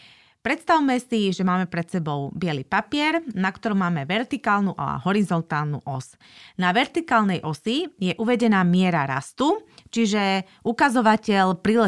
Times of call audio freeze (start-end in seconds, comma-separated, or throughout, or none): none